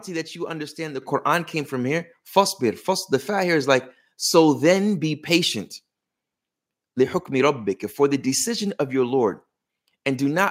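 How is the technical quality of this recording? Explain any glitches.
The recording has one clear glitch, an abrupt jump in level early in the speech. At 1.02 s, just after "that you understand the", the voice and the background noise both get louder at the same instant, by about 7 dB, and stay at that level. This is a microphone volume stepped up event: the call software judged the input too quiet and raised the microphone's input volume in a single step, so everything reaching the microphone became louder together.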